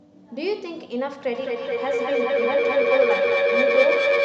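From 1.35 s until the end of the clip, a feedback howl takes over: sound from a loudspeaker is re-entering a microphone, and each trip around the loop comes back louder. The repeats narrow to a tone near 500 Hz that swells in pulses roughly every fifth of a second and peaks about 4 dB above the speech. A spectrogram would show a bright horizontal band near 500 Hz, thickening rightward; the waveform's envelope grows and throbs rhythmically.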